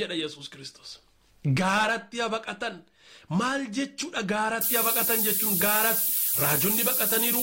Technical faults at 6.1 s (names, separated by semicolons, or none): low bit depth with noise shaping; damaged data in a compressed stream